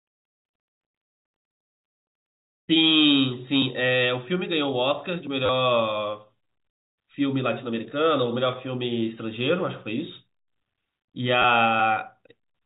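At 5.46 to 5.49 s and again at 11.42 to 11.44 s, packet loss with the last packet repeated occurs. About 30 ms, then 20 ms, went missing. The receiver replayed a stale packet, likely sized at 10 ms. Each patch gives a brief robotic stutter.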